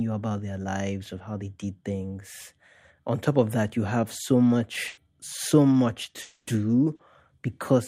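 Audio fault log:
4.87 to 4.99 s, burst of packet loss: a run of packets went missing here, roughly 100 ms of the speech in total. The receiver didn't go quiet. It kept the last sound going and let it die away across the hole, so you get a short held buzz or fading hiss in place of the real audio. After that the speech picks up further along, and whatever should have been in that tenth of a second is simply gone.
6.21 to 6.49 s, long network dropout: a longer gap this time, about 260 ms with nothing real in it. The sound doesn't cut to silence. It carries the last bit of speech forward as a buzz or hiss that keeps fading for the whole stretch, and then the real audio comes back further on with that quarter second missing. That long, fading fill points to the stream likely stalling on the network side rather than just dropping a packet or two.
6.95 to 7.01 s, short concealed packet loss: a tiny one near the end, about 40 ms that never reached the decoder in time. 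The concealment patched it by stretching the preceding sound, following its pitch if it was voiced or filling with shaped noise if not, then blending back into the real signal. It comes across as a quick smear or wobble rather than an obvious gap, and a brief consonant there could get swallowed.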